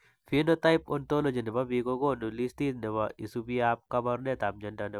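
No technical faults can be heard at any point in the recording.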